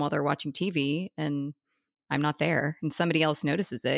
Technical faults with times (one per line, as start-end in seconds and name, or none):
none